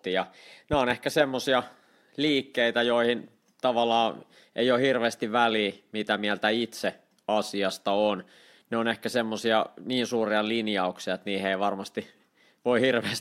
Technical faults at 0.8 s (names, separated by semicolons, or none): loud pop